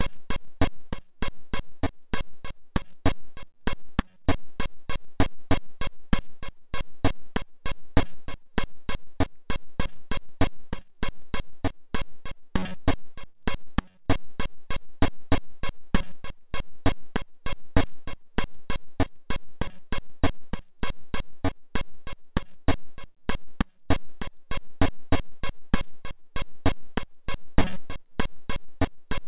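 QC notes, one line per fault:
throughout: clock drift between sender and receiver. The sending clock runs about 3% slow against the receiver, so the jitter buffer keeps draining and the receiver has to stretch the audio to stay fed. The result is a faint, persistent unsteadiness in pacing rather than any single obvious event. On a spectrogram, with the G.711 band ending at 4 kHz, events sit slightly further apart in time than they should, and there is no steady pitch shift.
0.55–29.13 s: repeated timing corrections. Across this whole span the receiver inserts short repeated slivers of audio at uneven intervals, all in the lengthening direction, running the material at about 97% speed and adding roughly a second in total. Each repair is small, so if it is heard at all, it comes across as a brief hiccup or stumble in rhythm. On a waveform, short stretches appear duplicated at irregular points, and on a spectrogram, transients are slightly smeared or doubled where the patches join.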